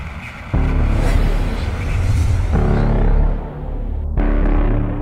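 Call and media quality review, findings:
No faults found in the reviewed audio. Nothing in the clip calls for a ticket entry.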